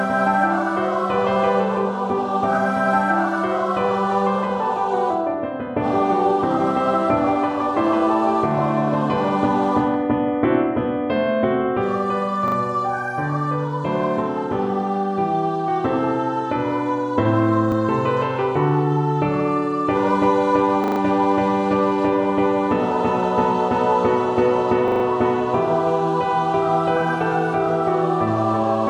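A repeated buffer occurs at 12.48, 17.72, 20.84 and 24.88 s. New audio arrived late, so playback replayed its last block, which fits a 40 ms buffer. At 17.72 s one extra copy gives a brief click-like stutter. At 12.48 s two copies span 80 ms. At 20.84 and 24.88 s four copies span 160 ms and sound like a short buzz. A waveform shows identical 40 ms segments butted together with hard joins, and a spectrogram shows vertical lines at each seam.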